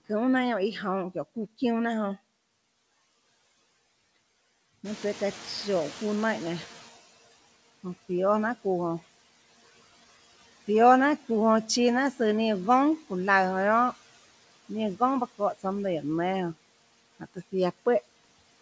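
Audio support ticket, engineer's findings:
Noise suppressor artifacts, whole clip. Background drops about 14 dB between phrases, swells back under speech. Per-band gain riding frame by frame. Band limit at 8 kHz, consistent with G.722 call path.

Noise suppressor catching up, 4.84 to 6.97 s. Room noise jumps around 5 s, passes with less reduction at first, then sinks by about 12 dB over 2.13 s. Suppressor noise estimate lagging the sudden rise.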